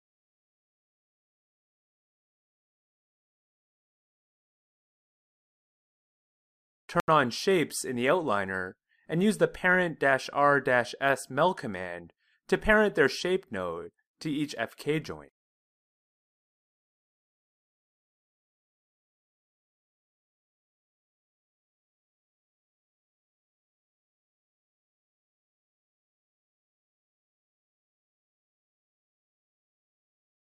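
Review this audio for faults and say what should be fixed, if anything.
A block of digital silence runs from 7.00 to 7.08 s, an 80 ms hole where the sound cuts out with no fade. Prevent it with larger output buffers and guards against invalid values in processing.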